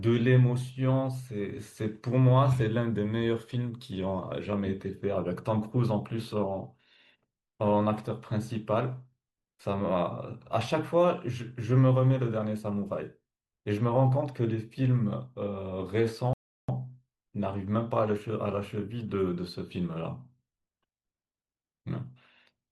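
A speech recording with one rebuffering stall from 16.33 to 16.69 s. Playback starved for data and paused, adding about 0.35 s of silence before resuming exactly where it stopped. On a waveform it shows as a flat gap; on a spectrogram, a blank vertical band across all frequencies.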